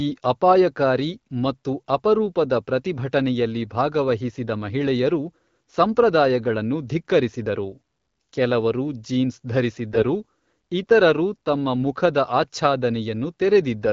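From 9.92 to 10.04 s the speech turns briefly hoarse and gargly while keeping its pitch and level. These are AMR bit errors: around one bit in twenty of the lightly protected bits arrived flipped over roughly six 20 ms frames, in the AMR-WB stream at 12.65 kbit/s.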